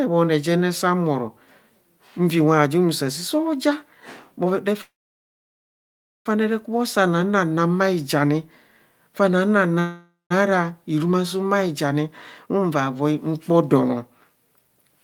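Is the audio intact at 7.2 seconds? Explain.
Yes, the speech at 7.2 seconds plays through intact, with no dropout, click, distortion or other fault at that moment.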